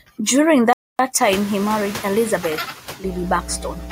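Noise suppressor artifacts run through the whole clip. The suppressor treats the steady background as noise and pulls those frequency bands down frame by frame, by about 7 dB. So the residue dips in the gaps between phrases and swells back under the speech.

A playback stall hits at 0.73 s and lasts until 0.99 s, a gap of about 260 ms. The sound cuts out mid-flow and goes silent, then resumes. The likely cause is the player running dry of buffered data or its thread being held up, so nothing reached the output until it recovered. The break is long enough to clearly interrupt the flow of speech.

Noise suppressor catching up runs from 1.20 s to 2.58 s. Around 1 s the room noise jumps by about 18 dB to about 20 dB below the speech, and the suppressor's noise estimate is still tuned to the quieter background. The louder noise therefore comes through with less reduction at first. Over the next 1.38 s the estimate adapts, and the noise sinks steadily to about 5 dB of reduction.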